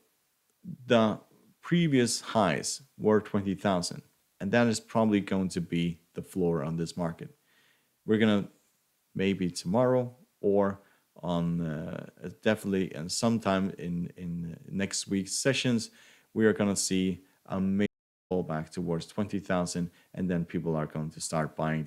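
The input feed was likely lost for a moment, through a dropped connection or a brief mute, while recording carried on writing silence. At 17.86 s this audio dropout to silence cuts the sound off abruptly, leaving about 0.44 s of dead silence, without room tone, before it resumes at 18.31 s.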